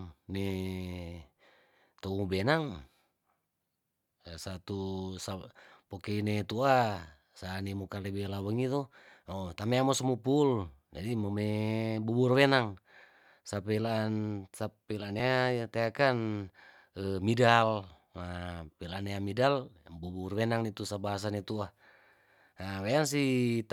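At 9.99 s, after "lewelawengi to oh tamea", and at 15.2 s, between "sapelaan sapelaan" and "nea teaken", the speech jumps, likely a dropped buffer (overrun) cutting out a few milliseconds. The two sides join directly, with no gap of silence.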